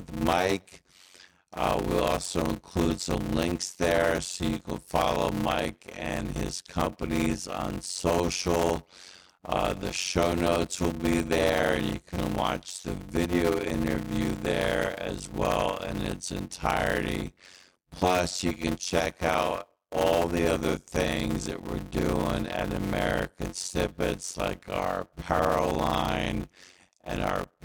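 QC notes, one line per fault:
Throughout, block size mismatch (padded): every block gets a zero-filled gap, giving a 91.9 Hz buzz and speech slowed to 0.533x, which fits 256-sample writes.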